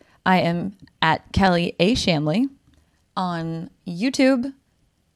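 No technical faults can be heard at any point in the recording.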